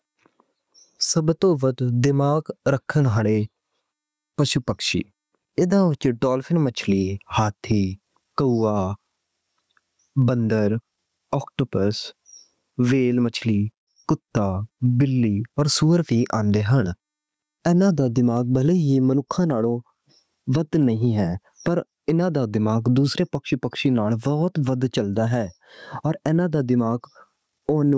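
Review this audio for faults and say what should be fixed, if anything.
Gain pumping throughout: the level swings by about 20 dB, ducking under loud syllables, likely from excessive mic gain driving a fast limiter. Reduce the microphone input gain so peaks stay below the limiter threshold.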